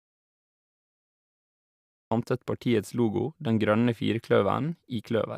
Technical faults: audio dropout to silence

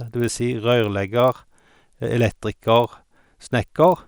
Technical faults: resampler restarted on every block

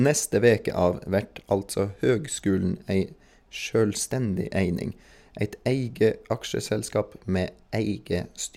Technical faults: none

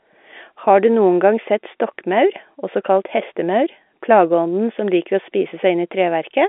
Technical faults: none

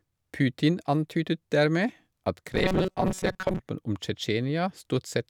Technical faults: robotic sound from repeated short buffers

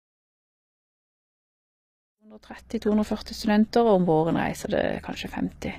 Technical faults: HE-AAC compression

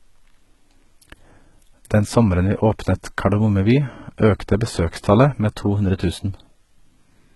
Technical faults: HE-AAC compression

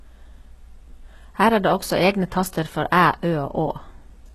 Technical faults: HE-AAC compression

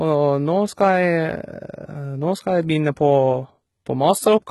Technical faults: HE-AAC compression

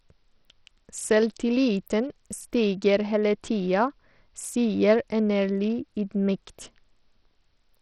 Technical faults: Bluetooth SBC compression

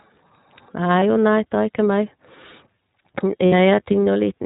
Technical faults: iLBC codec; lost iLBC frames

